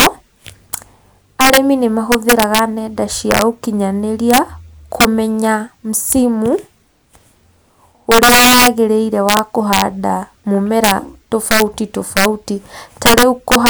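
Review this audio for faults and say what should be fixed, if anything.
Integer overflow runs throughout this speech. Gain pushed about 6 dB too hot wraps around one percent of samples to the opposite sign, causing violent cracks. Fix it by saturating or limiting sums before conversion.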